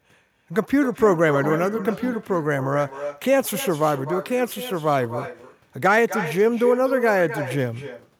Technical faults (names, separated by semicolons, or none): echo with no canceller